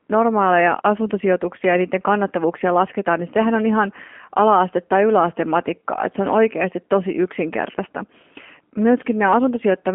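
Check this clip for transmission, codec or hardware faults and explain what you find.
One fault runs through the whole clip: G.729 codec damage, plainly audible. The speech has been rebuilt by a low-bitrate model, with a sound that fits 8 kbit/s G.729A over a telephone line band of 200 Hz to 3.4 kHz. Each 10 ms frame becomes a vocal tract filter, pitch predictor and sparse pulses, so speech sounds rough and synthetic. A spectrogram shows nothing above 3.5 kHz, a hard ceiling, with smeared, blocky harmonics.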